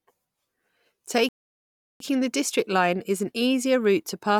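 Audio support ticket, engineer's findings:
Playback stall, 1.29 to 2.00 s. Speech cuts out mid-flow; output fully silent for about 0.72 s, then resumes. Likely cause: player buffer underrun or blocked audio thread, so nothing was fed to the device until it recovered. Distinguishing point: gap far longer than a short codec or packet dropout of a few tens of ms, and one single stop rather than a pattern of short gaps.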